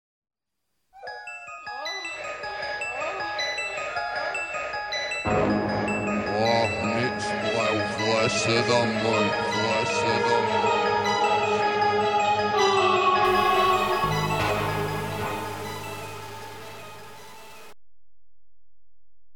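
From 13.25 s to the end, a stuck bit, likely a single data line or converter bit held at one value, puts about half the samples out by a step around -40 dBFS, giving harsh, buzzy distortion and a noise floor that fills the quiet passages.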